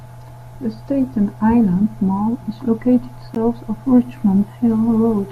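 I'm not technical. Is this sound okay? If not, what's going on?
No. At 3.35 s there's a gap between stream segments: a hard-edged silence of about 15 ms is inserted where two pieces join. Nothing is lost, unlike a dropout, which would cut out some of the speech.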